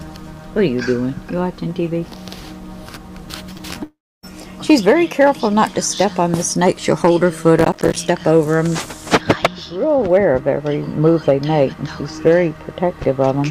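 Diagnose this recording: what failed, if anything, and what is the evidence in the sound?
Network stage, short concealed packet loss: there are brief smears at 3.53 to 3.57 s and 3.57 to 3.61 s, two back-to-back holes of about 20 ms each, and a third at 3.73 to 3.77 s. Each gap was bridged by the receiver extending the preceding sound, either pitched or as shaped noise, before crossfading into real audio. That produces a soft smear or wobble, and a short transient inside a gap can vanish.

Network stage, long network dropout: from 3.83 to 4.25 s roughly 400 ms of audio is missing. The concealer first stretches the last sound into a fading buzz or hiss. About 280 ms of that stretch ends up as silence, and the audio resumes later without the lost portion. The cause is likely a network outage long enough to exhaust the concealment.

Converter or gain stage, hard clipping: the peaks are cut flat in six places. 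These are 4.70 to 5.62 s at about 4 dB over, 6.01 to 8.39 s at about 5 dB, 9.14 to 9.46 s at about 8 dB, 10.14 to 10.49 s at about 2 dB, 11.07 to 11.63 s at about 4 dB, and 12.27 to 12.37 s at about 3 dB. The flattened tops generate high harmonics, heard as crackle on loud moments.

Driver or buffer stage, processor overload crackle: from 7.59 to 7.97 s a gritty tearing rides on top of the clipped section. The processor repeatedly failed to deliver small buffers on time, and each miss was filled with a hard-edged silent gap. The spacing fits buffers of around 5 ms, with roughly thirty deadlines missed across the stretch. The crackle stops once the load eases.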